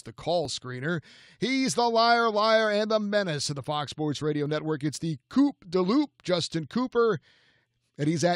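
A speech recording with an overlap between stream segments, heard as brief skips at 0.45 s and 4.46 s, 4 s apart. Each time, 12 to 17 milliseconds are trimmed where segment timestamps overlap, so the waveform jumps. Unlike a dropout, no silence or concealed gap is left.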